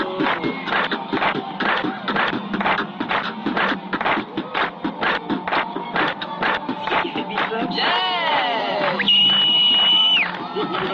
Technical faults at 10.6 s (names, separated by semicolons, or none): none